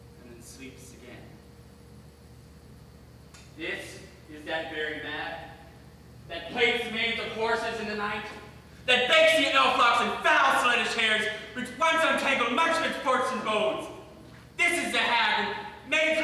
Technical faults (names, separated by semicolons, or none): none